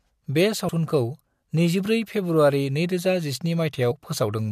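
At 0.68 s and again at 3.90 s, compressed frames are skipped in the speech. Whole frames never get decoded, so the audio jumps ahead, roughly 70 ms the first time and about 50 ms the second.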